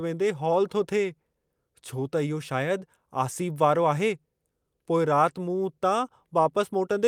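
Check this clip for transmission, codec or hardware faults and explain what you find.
No transmission, codec or hardware fault can be heard anywhere in the speech, so the signal arrives intact and continuous throughout.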